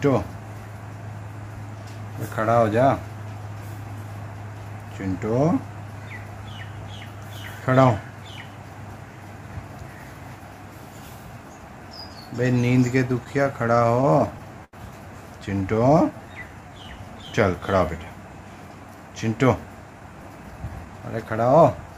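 Repeated stalls (stutter) run from 13.13 to 14.75 s: ten times the jitter buffer ran empty and the last sound was held, about 186 ms in all, longest 85 ms, so the audio drags.

Jitter buffer slow-down follows from 15.61 to 18.06 s: repeated pitch periods or pause fragments add 187 ms, so the audio plays at 93% speed at the same pitch, drawn out.

Jitter buffer speed-up from 19.93 to 21.61 s trims short pitch-period pieces, about 200 ms in total, to reduce buffered delay, so the audio runs hurried at 112% speed without a pitch change.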